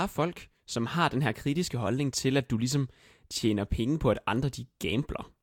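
No technical faults can be heard anywhere in the speech recording. Nothing in the signal chain draws attention to itself at any point.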